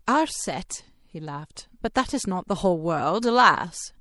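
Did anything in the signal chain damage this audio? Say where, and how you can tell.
Yes. The damage comes from the codec stage and lasts the whole clip: the speech has a watery, swirling texture and metallic chirps on s sounds, likely from MP3 compression at a rate that fits about 64 kbps. A plain low-pass filter would only dull the sound, without that flickering as weak detail drops in and out frame by frame.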